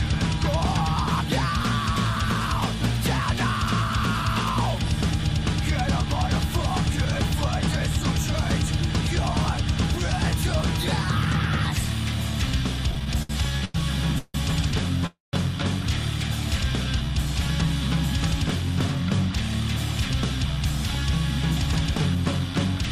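From 12.91 to 13.76 s the audio stutters repeatedly. Late packets drained the jitter buffer eight times, and each gap was filled by stretching the last sound, the longest for 96 ms. About a quarter of that span is fill. The audio drags, but nothing is lost.

Then come two call audio freezes. At 14.18 s the last sound hangs as a fading buzz or hiss for 159 ms. At 15.06 s a longer 268 ms hold fades to silence before the audio resumes. Packets held up in transit likely emptied the buffer. Each freeze inserts a pause, and nothing is skipped.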